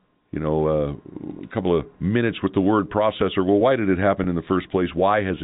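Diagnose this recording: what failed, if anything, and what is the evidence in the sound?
The network stage dropped a short run of packets at 4.24 to 4.26 s, and the receiver covered the gap with packet loss with pitch repetition. About 20 ms of speech went missing, which fits two 10 ms packets. The concealment looped the last pitch period across the hole, so instead of a dropout there is a brief held, slightly buzzy tone before the speech resumes. The G.711 telephone coding carrying the call keeps everything under 4 kHz.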